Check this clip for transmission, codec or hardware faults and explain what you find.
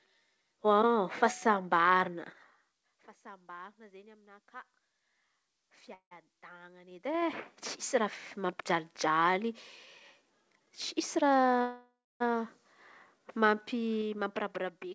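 Two kinds of fault are present: two call audio freezes and a jitter buffer speed-up.

From 5.94 to 6.13 s, and again from 11.61 to 12.22 s, the speech stalls. The last sound carries on as a fading buzz or hiss, then about 100 ms and 280 ms of silence. The likely cause is delayed packets emptying the jitter buffer. Speech resumes where it stopped, so nothing is lost. The gaps add 171 ms and 590 ms of delay.

From 11.16 to 11.61 s there is a jitter buffer speed-up. The buffer held too much audio, so the receiver cut out short pitch-period pieces, about a tenth of a second in total. The speech runs at 120% speed with unchanged pitch and sounds hurried.

The G.722 call path cuts everything above 8 kHz.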